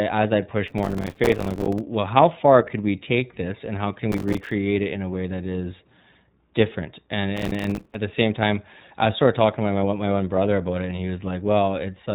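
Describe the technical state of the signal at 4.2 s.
At 4.2 s the speech is inside a burst of processor overload crackle. It runs from 4.12 to 4.51 s, right after "this and how can" and before "it in a way". The processor missed dozens of tiny buffer deadlines in a row, each around 3 ms. Every miss drops a short gap of silence with hard edges. Together they make a gritty, tearing crackle over the speech.

Underneath, the iLBC codec is plainly audible here too. Nothing above about 3.8 kHz gets through, so the speech sounds narrowband. Each frame's excitation is coded on its own, which gives a rough, slightly synthetic texture. The sound fits iLBC's 30 ms frame mode at about 13 kbps.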